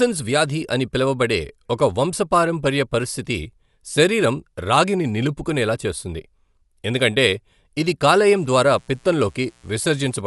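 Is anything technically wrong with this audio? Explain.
Yes, there are two faults. Throughout the speech, the sound points to low-bitrate coding, likely Dolby Digital compression at around 64 kbps. The encoder cut the band, leaving nothing above 11.5 kHz, and starved many frequency lines of bits so the decoder filled them with noise. The speech sounds plainly dull and carries a rough, fluttering haze.

From 8.10 s to 10.23 s there is mains buzz. Switching spikes from 60 Hz power leak in twice per cycle, spreading harmonics up into the kilohertz range. You hear a steady, raspy buzz, faint and well below the speech.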